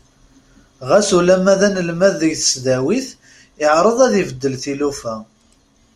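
Nothing stood out as a problem on listening to this speech recording.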